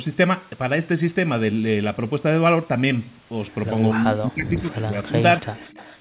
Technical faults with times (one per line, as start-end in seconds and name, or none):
3.91-5.15 speech suppressed in double talk
5.41-5.78 speech suppressed in double talk
5.55-5.98 echo leak